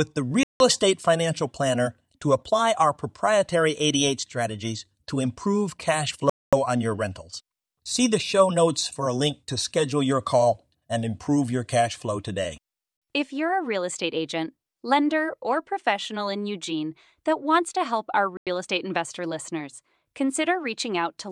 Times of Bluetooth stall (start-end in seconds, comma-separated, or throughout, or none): 0.43-0.60, 6.30-6.53, 18.37-18.47